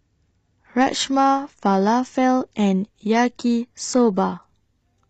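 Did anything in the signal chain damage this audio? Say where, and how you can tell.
Yes. At 0.86 s the speech suddenly thins out and stays that way to the end, which is an adaptive stream at a lower bitrate. There's no gap, just a clean switch: the treble turns papery and synthetic, and codec artefacts come up. That fits a network slowdown pushing the player from something like 96 kbit/s AAC-LC down to roughly 20 kbit/s HE-AAC, where the top end is rebuilt rather than actually coded.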